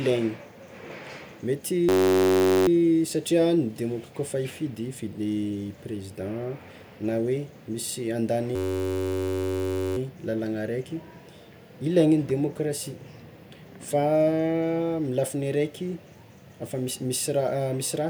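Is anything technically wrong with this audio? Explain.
Yes. A system hang loop occurs twice, from 1.89 to 2.68 s and from 8.56 to 9.97 s just after "na misy". The machine stalled while the sound hardware replayed one 10.67 ms ring-buffer slice, which fits a 512-sample buffer, so the speech gives way to a steady buzz at about 94 Hz.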